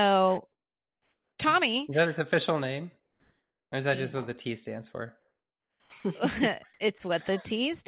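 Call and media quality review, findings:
Comfort noise in place of the background at 0.52–1.38 s, 3.00–3.72 s after "that his official name", and 5.20–5.92 s after "stands for". Real room tone replaced by smoother, featureless noise. Level about 3, 2 and 13 dB lower. Likely sender DTX during pauses, receiver synthesising noise.

Onset clipped by the voice detector at 5.80–5.92 s, closing the third gap. Speech resumes abruptly, soft start missing, about 120 ms lost. Likely slow sender VAD, with comfort noise played over the onset. Audio band-limited to 4 kHz, consistent with G.711.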